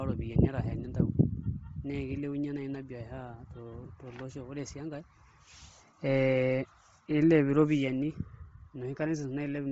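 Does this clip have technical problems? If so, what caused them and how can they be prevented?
Yes. Throughout the speech, the signal was likely carried over Bluetooth LC3 compression at a low bitrate, consistent with roughly 24 kbps in 7.5 ms frames. The codec discards much of the upper spectrum and fills it with noise, leaving a heavily grainy, breathy edge and nothing above 7.8 kHz. To prevent it, record over a wired connection, or select a higher LC3 bitrate on the Bluetooth link.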